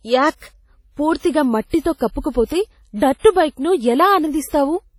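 From start to finish the speech carries heavy codec damage: a ringing, washy smear with hiss that swells and fades with the signal, and nothing above 17.5 kHz. That points to likely WMA compression, fitting an old encoder at around 32 kbps.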